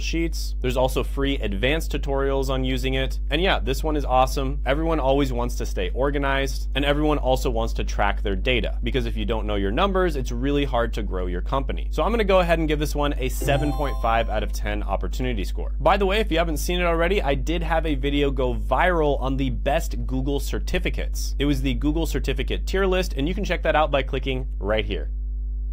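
Mains hum runs through the whole clip, from start to finish. Power-line current is leaking into the signal path, most likely through a ground loop or a transformer sitting close to the wiring, so a constant low drone at 50 Hz sits under everything along with a few low harmonics above it. The hum is roughly as loud as the audio itself, so it never fades into the background and competes directly with the wanted sound.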